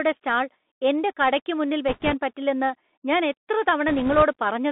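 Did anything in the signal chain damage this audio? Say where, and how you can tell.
Yes. At the codec stage, the whole recording passes through a Bluetooth CVSD headset codec. Content sits between about 200 Hz and 3.6 kHz, with a granular hiss and scratchy s sounds, which fits a 64 kbps one-bit stream. Its adaptive step can't keep up with loud, high-frequency energy, so it distorts.

At the link stage, bit errors on the Bluetooth voice link appear twice: from 1.88 to 2.15 s, right after "കടയ്ക്ക് മുന്നിൽ", and from 3.88 to 4.23 s, after "പറ്റില്ലെന്ന് ഞാൻ എത്ര". Both bursts bring a rushing, crackly noise without loud clicks. That fits an error rate of a few percent, because each flipped bit shifts the signal by one step, sized by the speech level, and then decays.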